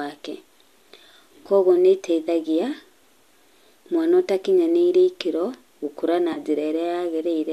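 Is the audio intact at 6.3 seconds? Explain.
No, there's an AAC frame loss with concealment from 6.33 to 6.38 s, right after "ũtakinyanĩire ikĩro gũkũra na". Roughly 30 ms went missing, and the decoder patched the gap from the last good spectrum, leaving a brief smeared, noisy blip.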